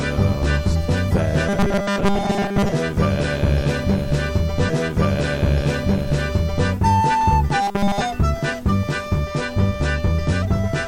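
A music clip with two kinds of fault. From 1.49 to 2.72 s and again from 7.62 to 8.02 s there's robotic sound, a rigid 200 Hz buzz, likely from repeated short buffers, each about 5 ms long. It covers most of the first stretch and nearly all of the second. At 4.65 to 6.64 s a stream segment is repeated: roughly 2 s plays again after a small blip at the jump back, as if the player queued that chunk twice.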